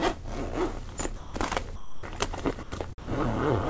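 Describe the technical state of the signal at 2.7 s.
At 2.7 s the sound drops out between 2.63 and 2.72 s, about 90 ms, and comfort noise fills the gap before the signal returns. This is most likely sound dropped by the voice detector: the sender judged that stretch to be background, stopped transmitting, and the receiver substituted comfort noise. Unlike packet-loss concealment, nothing is repeated or smeared; the gap holds comfort noise, band-limited at 8 kHz like the rest of the G.722 call audio.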